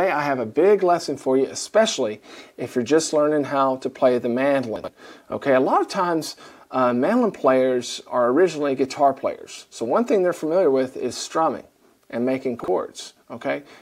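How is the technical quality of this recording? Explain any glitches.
The recording has two brief ordering glitches, both chunks out of order. From 4.76 to 4.88 s, a 40 ms chunk was delivered two chunks late, and from 12.6 to 12.68 s, one arrived a chunk late. Each swap creates three abrupt joins, heard as a quick jumbled stutter.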